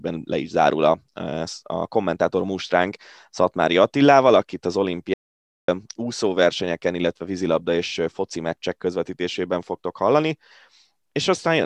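The input was likely lost briefly, so silence was written. An audio dropout to silence runs from 5.14 to 5.68 s, after "akit az", cutting the speech to dead silence until "úszóversenyeken illetve vízilabda és".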